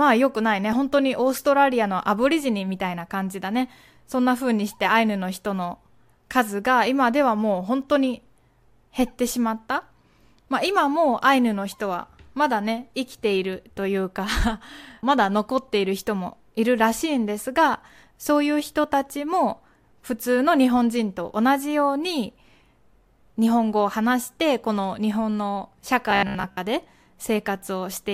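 From 26.11 to 26.59 s, robotic sound from repeated short buffers: a 66.7 Hz metallic buzz, likely from looping 15 ms chunks, shown as identical repeating waveform cycles and evenly spaced spectrogram harmonics.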